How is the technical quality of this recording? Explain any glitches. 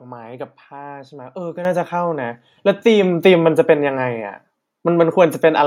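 The speech has two sudden level jumps. At 1.65 s and 3.03 s the microphone volume steps up, by about 8 dB then about 4 dB, as software raises the input gain in one move. Voice and background noise jump and stay louder together, unlike a gradual automatic-gain ramp.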